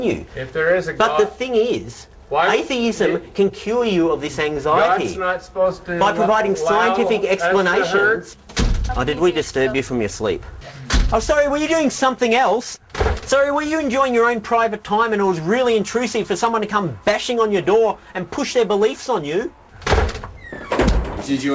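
No faults found; the audio carries nothing above 8 kHz, consistent with a wideband call path such as G.722.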